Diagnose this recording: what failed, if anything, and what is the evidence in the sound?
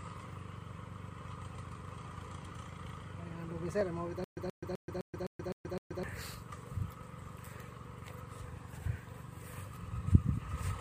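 Clock drift buffer slips at the driver or buffer stage: a click roughly every 0.96 s from 0.93 to 10.52 s, likely two clocks a few hundred ppm apart dropping or repeating small sample blocks.

Stutter with silent gaps during playback or streaming: from 4.24 to 6.03 s a 128 ms fragment repeats seven times with 128 ms of silence between, likely a stalled stream replaying its last chunk.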